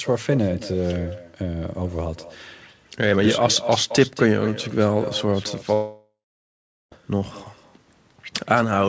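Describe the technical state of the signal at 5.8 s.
At 5.8 s the stream has most likely stopped delivering audio, a long network dropout running from 5.74 s to 6.93 s. With nothing arriving, the receiver extends the last received sound as a fading buzz or hiss, which dies away into silence for the latter part of the gap. When the signal resumes at 6.93 s, about 1.2 s of the original audio is simply gone, so the sound jumps forward rather than picking up where it left off.

Underneath this, echo with no canceller runs through the whole call, including this moment. The far end is playing the call over a loudspeaker, and its microphone feeds that back without any echo cancellation removing it. The talker's voice therefore returns roughly a fifth of a second later as a quieter, thinner copy, about 13 dB below the direct signal, trailing behind whatever audio surrounds the dropout.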